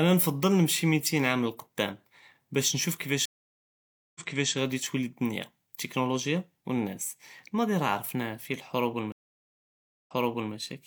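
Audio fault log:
3.25–4.53 s, stream reconnect: the connection dropped and a fresh decoder restarted mid-stream, so 0.9 s of silence follows "עאם ללקדאם באש נשוף" and speech resumes 0.37 s earlier, repeating, before "גאדי טולי אלדוניה אלטכנולוגיה".
9.12–10.53 s, stream reconnect: the link broke again and the decoder restarted, leaving 0.94 s of silence before the speech resumes 0.46 s earlier, replaying what was already heard.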